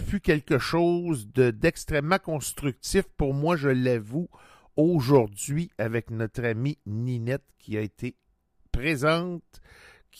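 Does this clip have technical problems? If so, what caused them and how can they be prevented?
No, there are no faults.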